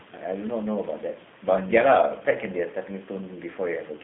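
From start to finish the speech carries the sound of the G.729 codec, with plainly audible damage. The audio is confined to a narrow telephone band of about 150 Hz to 3.5 kHz, so it sounds thin and boxed-in. The codec rebuilds speech from a vocal tract filter, a pitch predictor and a few pulses per frame, which gives a rough, synthetic texture consistent with an 8 kbit/s G.729A coder. The room noise, about 21 dB below the speech, takes on a warble through the codec.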